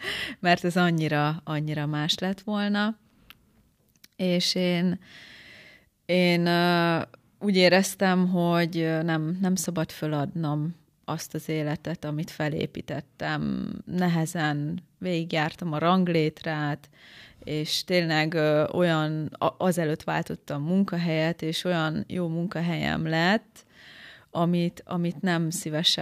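No audible technical faults.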